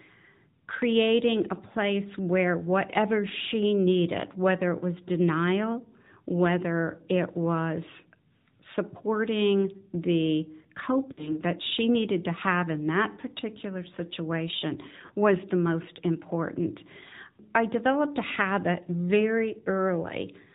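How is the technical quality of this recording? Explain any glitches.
The recording is noticeably degraded. It carries mobile-phone coding throughout and has two brief dropouts.

The AMR narrowband mobile codec affects the whole clip. The speech is sampled at 8 kHz. Nothing above 4 kHz survives, so it sounds muffled and boxy. The codec rebuilds each 20 ms frame from a vocal-tract model and a few excitation pulses. The damage is plainly audible: a buzzy, synthetic edge on the voice. The degree of coarseness fits a bitrate around 10.2 kbps.

Lost AMR speech frames occur twice. The first runs from 11.12 to 11.40 s, just before "that she needed to". The second runs from 15.06 to 15.11 s, between "in that particular situation" and "was the most important". Radio errors corrupted frames, so the decoder repeated the last good pitch and vocal-tract settings at falling gain. About 60 ms and then 40 ms of audio were concealed. 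Each gap is heard as a short smeared, warbling dip, and the voice is briefly weak as it recovers.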